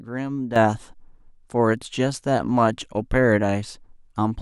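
At 0.56 s the speech steps up by about 10 dB in a single instant and stays there to the end of the clip, a sudden gain jump. The likely cause is a digital gain setting or bit shift applied from one sample to the next with no ramp. What separates it from a talker simply getting louder, or from an automatic gain control easing in, is that the background noise jumps by the same amount at the same moment, with no gradual transition.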